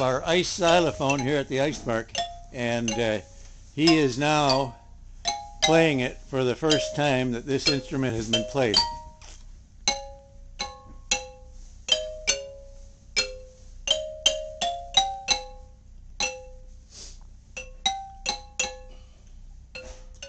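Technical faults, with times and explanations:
4.12 s, 8.10 s, 16.10 s: overlap between stream segments. Each is a tiny click or skip where between about 5 and 18 milliseconds of sound vanish and the waveform jumps. Overlapping segment time stamps made the player trim audio that wasn't actually doubled, near boundaries that fit 4-second segments.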